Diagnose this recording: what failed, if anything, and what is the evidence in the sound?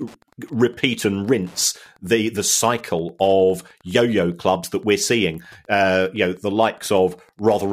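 Wi-Fi interference has got into the analogue wiring. A faint, steady ticking runs under the speech for the whole clip, well below the voice. The ticks repeat every 102.4 ms, about ten per second. A nearby radio's beacon is being rectified by the audio circuit.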